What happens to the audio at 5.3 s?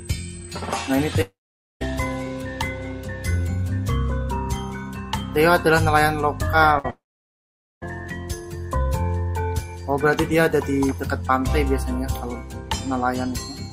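Nothing goes wrong at 5.3 s: the audio plays through that moment intact, with no dropout, click, distortion or other fault.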